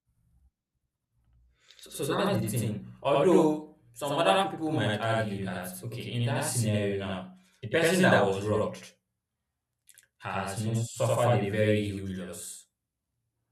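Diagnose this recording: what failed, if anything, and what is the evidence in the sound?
Speech throughout has a same-level slap echo 85 ms late: channel delay (doubling), a buffer-stage fault where one channel lags, fitting a 4096-sample buffer, before mono summing.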